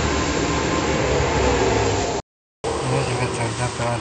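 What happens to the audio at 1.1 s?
Nothing goes wrong at 1.1 s; the speech there plays through intact, with no dropout, click, distortion or other audible fault.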